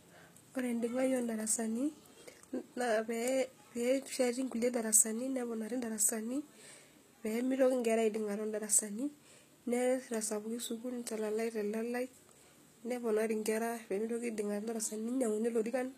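Speech with gritty, metallic treble and lispy s sounds throughout, most likely HE-AAC compression at a low bitrate, around 20 kbps, rebuilding highs by band replication.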